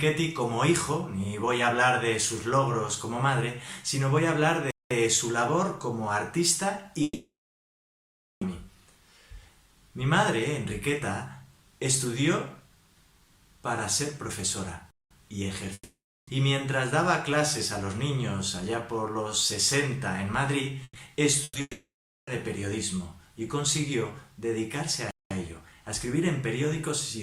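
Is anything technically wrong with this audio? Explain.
Yes. The audio has three kinds of transport fault: gaps between chunks, long network dropouts and bursts of packet loss.

Gap between chunks, at 4.71 to 4.91 s, 14.91 to 15.11 s and 25.11 to 25.31 s: the audio was delivered in 10-second chunks, and each join leaves a 200 ms silence, from padding or a chunk that starts late. Nothing is lost, but the sound is interrupted at each join, so you hear short holes that repeat every 10 seconds.

Long network dropouts, at 7.03 to 8.44 s, 15.73 to 16.30 s and 21.61 to 22.30 s, are likely the result of audio not arriving for a sustained stretch. The receiver extends the last sound as a fading buzz or hiss, then falls silent, for about 1.13 s, 0.36 s and 0.45 s respectively. When the sound returns it has skipped ahead, missing 1.38 s, 0.54 s and 0.66 s.

Burst of packet loss, at 20.83 to 20.98 s and 21.43 to 21.58 s: a short run of packets was lost or arrived too late. 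The receiver fills each hole by stretching and fading the last sound, leaving only a brief silence of about 40 ms and 30 ms before playback resumes. About 120 ms of material is missing each time, heard as a brief held buzz or fading hiss. The second burst runs almost straight into the dropout at 21.61 s.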